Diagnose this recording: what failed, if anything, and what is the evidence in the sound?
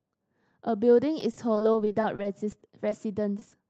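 Driver or buffer stage: a repeated buffer at 1.21 s, where one short piece is played four times in a row. This gives a brief buzz that fits a 128-sample buffer. The waveform shows identical 2.7 ms cycles with hard joins.

Network stage: repeated packet loss (robotic sound) from 1.31 to 2.93 s. Frequent holes, up to 30 ms each, are concealed by extending the last sound. The spectrogram shows smeared, frozen harmonics broken by dropouts.

Network stage: short concealed packet loss at 3.39–3.43 s and 3.49–3.53 s. Each 20 ms hole is patched by continuing the speech, which produces a brief wobble. On the spectrogram, the harmonics appear flattened there.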